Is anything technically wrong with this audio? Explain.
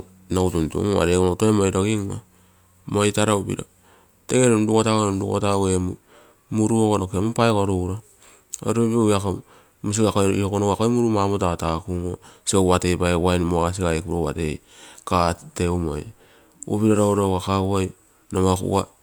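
No, there are no technical faults.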